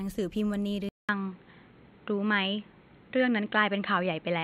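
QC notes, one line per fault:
0.89 s onward, input switched to a poorer device: likely a mid-recording input change; after a 200 ms gap, sound turns dull, capped at 4.2 kHz, with faint new background noise.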